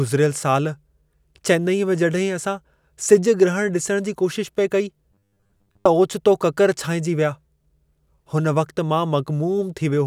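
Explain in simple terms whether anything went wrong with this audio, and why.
From 5.12 to 5.87 s, the speech turns into a stiff, metallic buzz at 100 Hz. This is robotic sound from repeated short buffers. The likely cause is late audio: a 10 ms scrap gets replayed over and over, covering most of that stretch.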